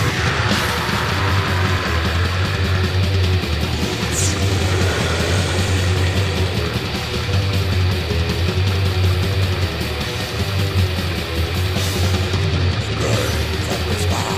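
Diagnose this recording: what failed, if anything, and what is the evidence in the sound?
Nothing in the signal points to a failure at any stage of the chain, with no dropouts, clipping, glitches or level disturbances audible anywhere in the recording.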